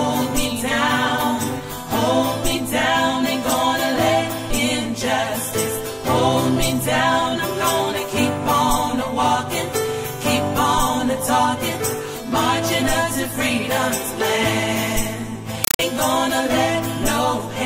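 Near the end, from 15.64 to 15.79 s, the audio gives way to harsh, chattering static: a compressed stream played as audio. It's an AC-3 bitstream taken as plain samples, each frame a 5.33 ms noise burst repeating at 31.25 Hz, which points to roughly 256 kbps.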